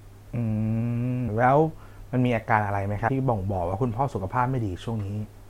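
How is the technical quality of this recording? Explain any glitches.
One glitch stands out in this speech clip. At 3.07 s, compressed frames are skipped. Roughly 70 ms goes missing, which fits about three 26.1 ms frames. The sound jumps ahead with a brief smeared blip, not a hard click.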